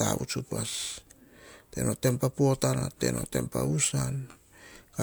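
Throughout the speech, the audio carries generation loss, with a swirly, hollow quality and softened attacks beyond what a single MP3 pass at 128 kbit/s should leave. It sounds like the clip was likely encoded about three times, each pass requantising on a shifted frame grid so noise and spectral holes accumulate.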